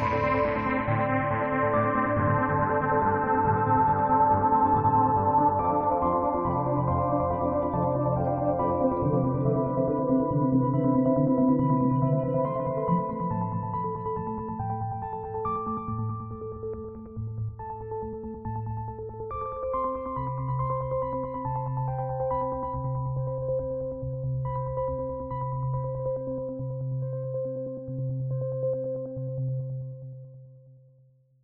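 No technical faults can be heard anywhere in the audio.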